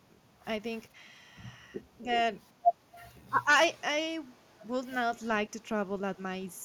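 At 2.03 s, then from 3.09 to 3.5 s, the speech dips, first slightly, then deeply. This is speech suppressed in double talk. The echo canceller likely turned down both sides at once. Echo leak follows at 3.63 to 3.81 s, 4.34 to 4.63 s and 5.19 to 5.32 s. A very faint copy of the speech returns 319 ms late. Loudspeaker echo likely slipped past the canceller.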